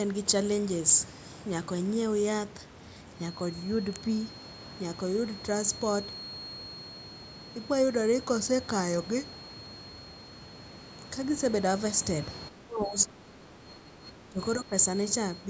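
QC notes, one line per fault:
3.1 s to the end, feedback whistle: a thin steady tone at 4.3 kHz sits roughly 20 dB under the speech and swells and fades slowly in level. That's likely the speaker-to-mic loop hovering right at the feedback point, ringing without ever running away.
12.49 to 14.40 s and 14.59 to 14.72 s, speech suppressed in double talk: the voice ducks by up to about 15 dB in the first stretch and around 10 dB in the short second one. Likely the echo canceller mistaking the talker for loudspeaker echo while both sides spoke.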